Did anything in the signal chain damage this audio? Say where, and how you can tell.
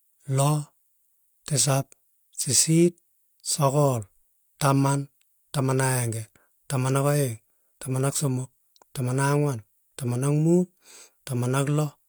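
No, nothing along the way seems to have damaged this speech recording; I can't hear anything from any stage of the chain that points to trouble.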